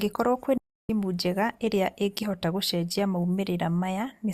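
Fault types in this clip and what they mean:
digital broadcast dropout: from 0.58 to 0.90 s the speech snaps to silence through a fade of about 3 ms, consistent with thirteen or so failed frames. The receiver muted, and that stretch is lost, until valid frames resumed at "njega ĩrĩa ĩngĩhota gũcenjia".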